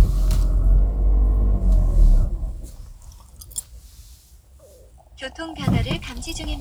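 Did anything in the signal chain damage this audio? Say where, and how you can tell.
No, nothing in the chain audibly damaged this recording of sounds; no stage leaves a mark on the signal.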